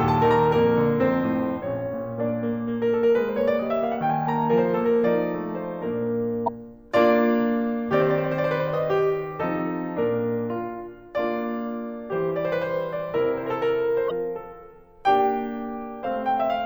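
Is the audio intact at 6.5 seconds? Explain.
No. From 6.44 to 6.49 s the music breaks into a brief chirp, squawk, click or short hole lasting about 44 ms, caused by damaged data in the compressed stream. Corrupted bytes there make the decoder misread the frames and lose sync until it locks onto the next valid frame header.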